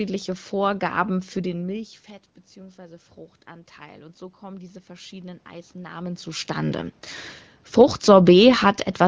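From 2.54 to 6.99 s, automatic gain rising. The input fell about 19 dB, so gain climbed about 8 dB, swelling voice and room noise together.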